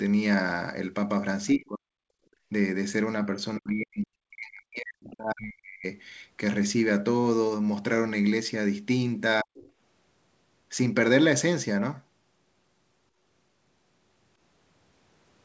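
From 1.51 to 2.01 s the talker's speech dips, by something like 40 dB at its deepest, and comes back when the dip ends. This is speech suppressed in double talk, likely caused by the echo canceller mistaking the talker for loudspeaker echo while both sides were speaking, and clamping the microphone.

Between 2.29 and 2.49 s it is the room sound, not the talker, that drops, by about 20 dB for a fifth of a second before returning. This is background gated by the echo canceller: the loudspeaker was playing, so the canceller pulled the microphone down. The difference from double-talk suppression is that nothing spoken is cut. Only the ambient floor ducks and recovers.

The longest suppression runs from 3.57 to 5.85 s, with around two seconds of the talker pushed down by roughly 40 dB in stretches, again the same double-talk clamping. Inside it, at 5.07 to 5.11 s, the other side's voice leaks through as a brief, faint scrap, roughly 30 dB below the talker, likely residual echo the canceller failed to remove. 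It is a second voice rather than a repeat of the talker's own speech, which is what separates it from an echo of the near end.

A final double-talk dip of about 40 dB falls between 9.42 and 9.69 s. Throughout, the audio has nothing above 8 kHz, consistent with the G.722 call codec at 64 kbps, and the lowest bass is removed by the call's high-pass filter.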